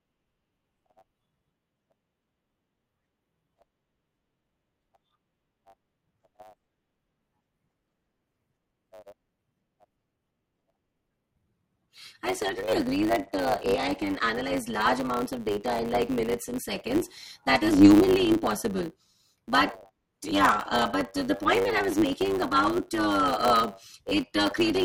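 Throughout the speech, a block size mismatch (truncated) trims the tail of each block: a steady 100 Hz buzz marks the block rate, fitting 512-sample writes, and delivery runs 1.07 times fast. Unlike a sample-rate error, timbre stays despite the speed-up.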